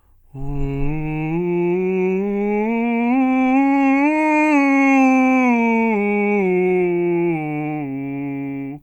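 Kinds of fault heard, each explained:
Nothing in this music stands out as a technical fault, so there's no kind of fault to list here.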